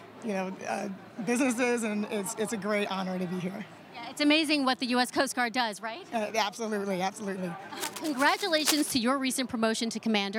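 From 7.77 to 8.95 s, a burst of scratching, rustling noise sits over the sound, only a few decibels below it, which makes it plainly audible. This is cable scratch noise, likely from a worn cable, connector or control being moved so that its contact resistance jumped about rapidly. Unlike isolated clicks or a digital dropout, the disturbance is dense and uneven, a grainy rasp, and the sound is never cut to silence.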